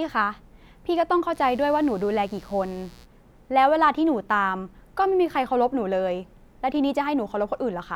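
A speech recording with mains buzz from 1.32 to 3.07 s. A steady, raspy buzz sits well below the voice. It is built on 60 Hz harmonics reaching several kHz. Switching spikes, twice per mains cycle, leak in through a dimmer, rectifier or missing shield.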